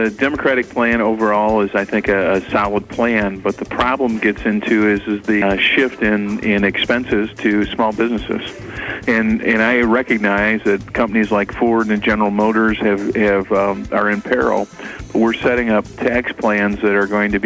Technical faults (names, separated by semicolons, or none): skip ahead; jitter buffer speed-up